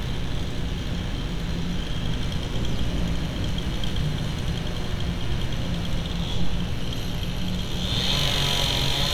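A recording of sounds carries mains buzz from start to finish. It is a steady, raspy buzz sitting fairly close beneath the wanted sound, roughly 15 dB down. The mains here is 60 Hz. Something in the chain, such as a dimmer, a rectifier or a missing shield, is letting sharp switching spikes in twice per cycle. That gives a 120 Hz repetition with a dense stack of 60 Hz harmonics reaching up to several kHz.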